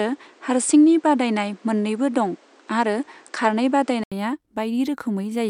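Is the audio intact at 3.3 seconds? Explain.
No. From 0.0 to 4.12 s the speech sounds duller, with nothing above 9.8 kHz, a few decibels different in level, and carrying its own faint noise floor well below the voice. At 4.12 s a gap of about 80 ms is followed by fuller sound. This is likely an input switched to a poorer device. Unlike a simple filter or codec bandwidth drop, the tone, level and background noise all change together, with silence at the switch.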